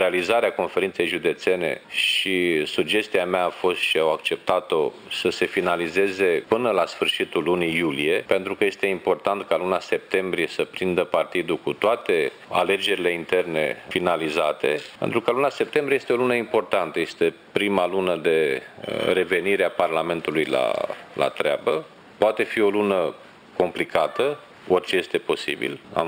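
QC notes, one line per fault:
Throughout: imaging from linear upsampling. Sibilants and bright high content carry a faint metallic shimmer over a dulled top end. The sound was raised from 12 kHz to 48 kHz by joining samples with straight lines, leaving mirrored spectrum copies between 6 and 12 kHz, roughly 25 dB down.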